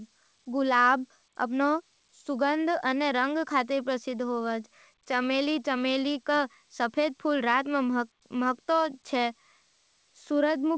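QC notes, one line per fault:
No faults heard in this speech recording.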